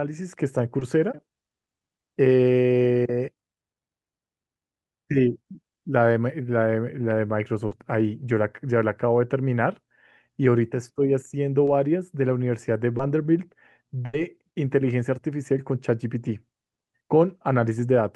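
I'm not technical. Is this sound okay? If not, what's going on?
No. Four short concealed packet losses, at 0.79, 7.67, 11.65 and 12.97 s, are 20 to 40 ms gaps the receiver patched over, heard as brief smears or wobbles. At 14.05 s, a burst of packet loss drops about 80 ms; the call software stretches the last sound into a fading buzz or hiss, then skips ahead.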